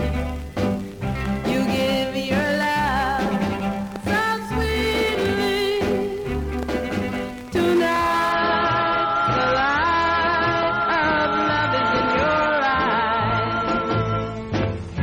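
The audio takes a sudden quality hit at 8.32 s and stays degraded to the end: an adaptive stream at a lower bitrate. Nothing survives above 9.4 kHz and codec swirl appears with no gap, which fits a switch from 128 to 32 kbit/s MP3.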